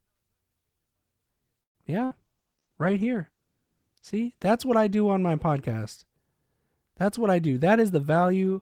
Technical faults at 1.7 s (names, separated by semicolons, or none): call audio freeze